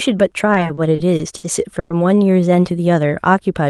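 From 0.53 to 1.92 s the speech hits repeated stalls, a stutter. Packets arrived too slowly, so the jitter buffer emptied eight times. Each gap was bridged by stretching the last sound, about 290 ms in total, longest 110 ms. Nothing drops out, but the speech drags and hiccups.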